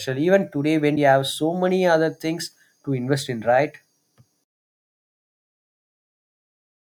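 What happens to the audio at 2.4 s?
Nothing goes wrong at 2.4 s; the audio runs through that moment intact, with no dropout, click, distortion or other fault.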